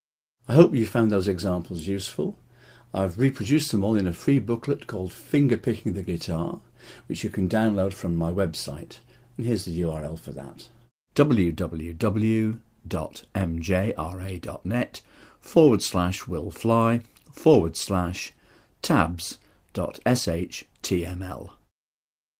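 No technical faults are audible.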